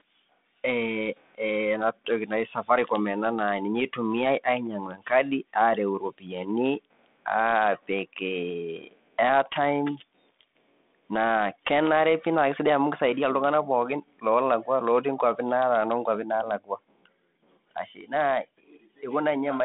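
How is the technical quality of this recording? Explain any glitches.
The technical quality of this recording holds up as narrowband telephone-coded speech, with no glitches to explain.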